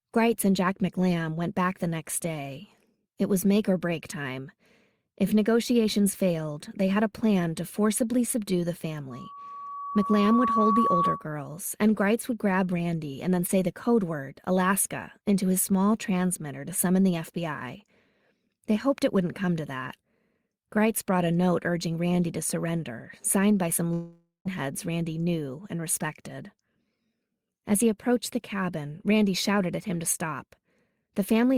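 At 9.10 s, right after "to forcibly subdue the", a loudspeaker feedback squeal starts: the microphone-to-speaker loop runs away at 1.1 kHz, swelling over roughly a second and a half to a few dB above the speech until 11.27 s. A spectrogram shows one bright horizontal line thickening.

From 23.93 to 24.47 s, after "surrender signed by some", about half a second of audio is lost, likely a long network dropout. The receiver stretches the last sound into a fading buzz and then goes quiet. The waveform shows a decaying smear, then a flat stretch before speech resumes.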